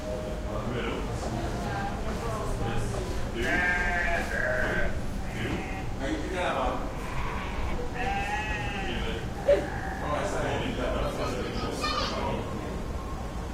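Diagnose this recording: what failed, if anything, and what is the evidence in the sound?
The failure sits at the network stage, where an adaptive stream dropped to a lower bitrate. At 10.91 s the sound abruptly drops in quality with more audible codec artefacts, and that degraded quality continues to the end at 13.54 s. The sharpness of the change fits the player switching from an Opus encode near 64 kbit/s to one near 16 kbit/s after throughput fell. Packet-loss concealment would leave brief gaps or smeared repeats. Here there is no gap and no stutter, only a clean step down in fidelity that holds.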